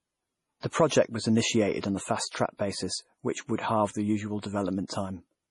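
Throughout the clip the speech sounds watery and swirly, with metallic chirps on sibilants and nothing above 11.3 kHz. The cause is likely MP3 compression, and damage this heavy points to a low bitrate of around 32 kbps. Short of bits, the encoder cuts the treble and drops weak frequency lines frame by frame.

From 0.60 to 0.63 s a brief hiss runs ahead of an attack, which sounds softened. This is pre-echo. The codec spread its quantisation noise across a whole block, so noise meant for the loud onset also filled the quiet 29 ms before it.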